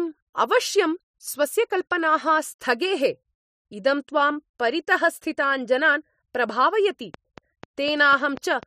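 From 7.14 s to 8.64 s, right after "जनान् प्रभावयति", a train of clicks runs over the speech. The clicks are evenly spaced, about four per second, roughly seven in all. Each has much the same sharp shape. They stand out clearly, peaking at about 5 dB above the speech. They sound like steady ticking laid on top of the sound. The likely cause is interference from nearby equipment or a faulty connection or power supply injecting repeated pulses.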